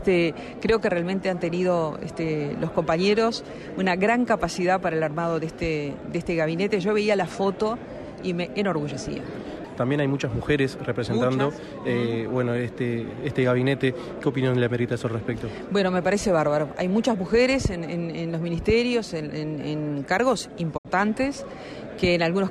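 The audio carries a single digital broadcast dropout from about 20.76 to 20.87 s. The receiver stopped getting decodable frames and muted. The sound fades out over roughly 20 ms into a short silent hole, and the lost stretch of about 64 ms fits two missing frames. When good frames resume, the programme picks up further along, not where it stopped, so that material is gone. This differs from a concealed network glitch, which fills the gap with repeated or smeared sound, and from a loose-cable crackle, which gives no clean fade.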